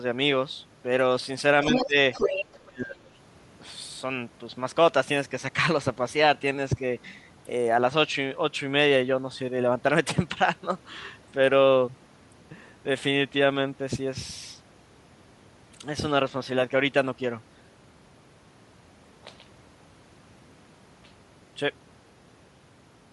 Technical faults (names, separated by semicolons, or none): Bluetooth LC3 compression; other side's voice leaking through; speech suppressed in double talk